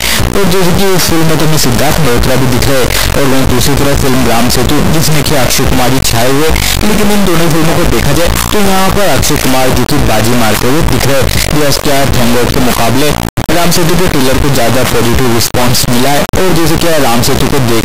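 From start to finish the audio suffers an integer read as float fault. The sound points to 32-bit integer samples decoded as 32-bit float, so values land near zero or far beyond full scale. The result is a harsh, extremely loud square-wave buzz slamming between silence and clipping.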